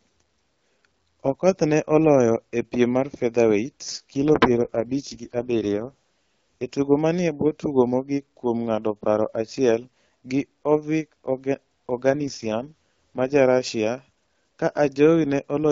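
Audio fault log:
3.83–6.75 s and 12.10–13.36 s, AMR rate drop: the speech turns rough and synthetic, which fits the codec falling from 12.65 to 6.6 kbit/s on a weak link. On a spectrogram the wideband top near 7 kHz persists but harmonics blur into noise; the waveform shows no gap.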